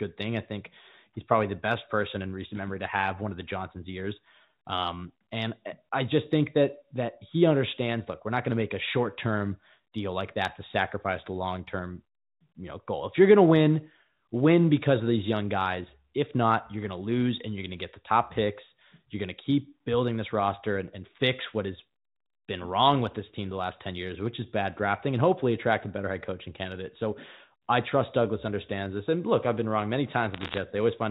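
Right after "I've been wrong many", from about 30.34 to 30.57 s, there's a burst of bit errors on a digital phone line. Around one percent of bits flipped in the G.711 A-law stream, corrupting scattered samples, so sharp ticks and crackle sit over the speech.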